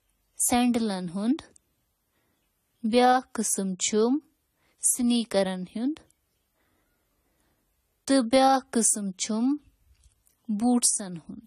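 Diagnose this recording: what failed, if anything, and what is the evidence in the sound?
The failure sits at the codec stage. AAC compression damage is plainly audible throughout the speech, with nothing above 14 kHz. A spectrogram would show a flat ceiling there, which fits coarse quantisation at a likely AAC-LC bitrate near 32 kbps.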